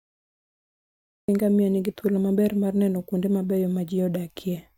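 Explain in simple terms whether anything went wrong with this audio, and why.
Yes, something went wrong: a cut-off start. The recording began late, after the speaker had already started. So the first 1.28 seconds are dead digital silence, and at 1.28 s the speech jumps in mid-sound, with no natural beginning or gentle rise.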